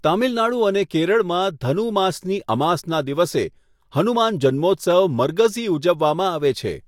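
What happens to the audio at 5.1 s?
Nothing goes wrong at 5.1 s; the speech there plays through intact, with no dropout, click, distortion or other fault.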